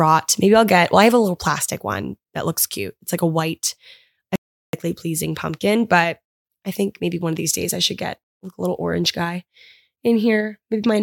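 From 4.36 to 4.73 s the speech falls into an audio dropout to silence, about 0.38 s of silence with no room tone, likely from lost input; the waveform goes flat and the spectrogram shows a blank vertical gap.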